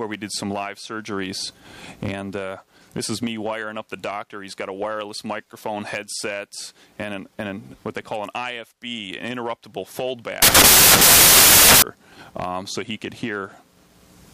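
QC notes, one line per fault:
10.42 to 11.82 s, samples built from the wrong bytes: for about 1.4 s the audio turns into loud, broadband noise. Here the reader joined each sample's bytes incorrectly, whether by a one-byte offset, a swapped byte order or a wrong alignment. That pushes the rapidly changing low bits into the most significant part of each value. The waveform stops following the sound and becomes nearly random. The result is a burst of noise where the audio should be.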